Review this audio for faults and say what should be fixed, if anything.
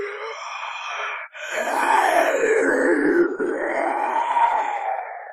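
Nothing to fix here; I listened through these sounds and didn't catch any technical faults worth flagging.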